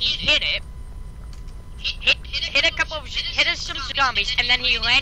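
Nothing stood out as a technical problem on listening.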